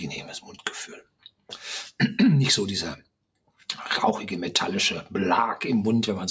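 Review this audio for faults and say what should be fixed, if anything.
Twice the sound sinks abruptly in level, from 1.01 to 1.51 s and again from 2.98 to 3.67 s, with the steadier parts dipping by about 19 dB and about 18 dB at their deepest, while sharper onsets still get through. This is sound cut by the noise suppressor, which mistook sustained material for background noise and pulled it down for a few hundred milliseconds each time. The call microphone processing limits everything to below 8 kHz. To prevent this, lower the suppressor's strength or raise its threshold.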